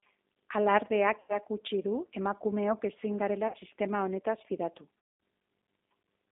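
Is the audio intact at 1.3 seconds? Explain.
No. VoIP packet loss concealed by the speech codec covers 1.2 to 1.37 s. About 90 ms of audio, likely three packets, went missing. The decoder extends its last pitch and filter at falling gain, so the sound is stretched into a buzzy tone or coloured noise that fades, then stays weak briefly after recovery. The G.729 codec also runs throughout. It rebuilds speech from a filter and a few pulses per frame, which fits an 8 kbit/s link. The band is held to 250 Hz to 3.7 kHz, and the sound is audibly rough and synthetic.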